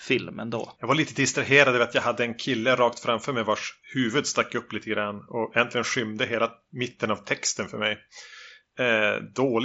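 No technical faults are audible.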